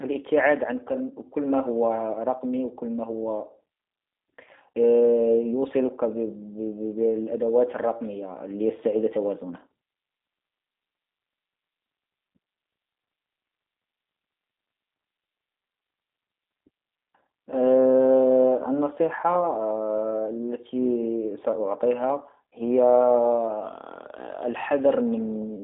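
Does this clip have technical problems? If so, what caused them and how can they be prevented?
Yes. The whole clip carries G.729 codec damage, and it is plainly audible. The speech sounds rough and slightly synthetic. Nothing is heard above about 3.7 kHz, and the low end fades below about 250 Hz. This points to an 8 kbit/s G.729A stream. That codec rebuilds each 10 ms frame from a vocal tract model, a pitch predictor and a few pulses, so fine detail is lost. To prevent it, carry the call with a wideband codec such as Opus or G.722.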